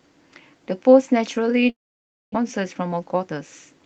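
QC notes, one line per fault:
1.69–2.49 s, long network dropout. The speech stops arriving here, and the likely cause is a stall in the network stream. The receiver first extends the last sound as a fading buzz. Then about 0.58 s of near silence follows. Around 0.6 s of the original speech is simply gone. When sound resumes, it picks up later in the stream, with a slight shift in timing. Nothing of the lost stretch returns.
2.92–3.30 s, jitter buffer speed-up. Speech plays at 112% of normal rate, yet the pitch stays put. The receiver had built up extra buffered audio and trimmed it back. It cut many tiny slices, each one or a few pitch periods long. Together they total roughly a twentieth of a second. The result sounds hurried.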